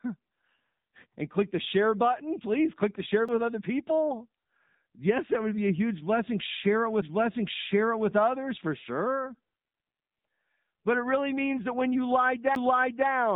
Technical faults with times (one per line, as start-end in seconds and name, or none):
0.00-13.36 AMR narrowband mobile codec
3.28 CD skip
7.01 CD skip
12.55 CD skip